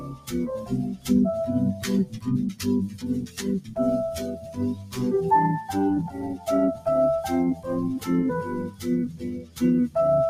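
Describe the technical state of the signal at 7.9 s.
At 7.9 s the noise suppressor applied to music or sounds is active, as it is for the whole clip. It treats sustained tones, ambience and decay as noise, letting onsets pass while pulling held material down by roughly 15 dB, so the sound pumps and thins.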